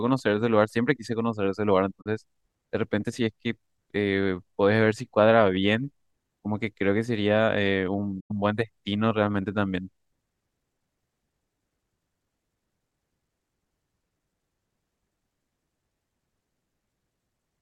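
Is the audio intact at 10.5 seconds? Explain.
Yes, at 10.5 s the audio is intact, with no fault at that moment.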